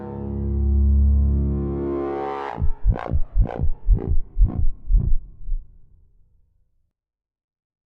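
A recording of everyday sounds with one sudden gain jump. At 6.91 s the level drops by about 21 dB in a single step and stays down to the end. The sound and its background noise fall together. The likely cause is a gain setting or bit shift applied without a ramp.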